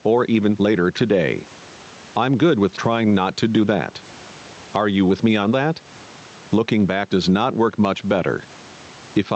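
Gain pumping runs through the whole recording. The background swells between phrases and ducks by around 15 dB under loud speech. The likely cause is excessive gain driving a fast limiter.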